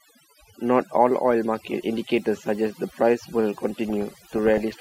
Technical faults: overdone noise removal; DAB burbling

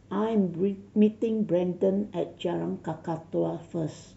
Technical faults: none

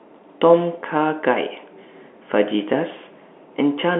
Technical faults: none

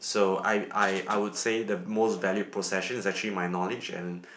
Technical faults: none

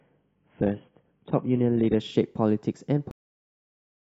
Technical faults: adaptive stream starting at a low bitrate; cut-off end

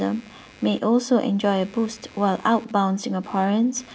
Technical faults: computer activity noise

